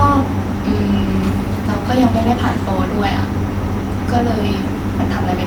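No technical faults can be heard in this speech recording.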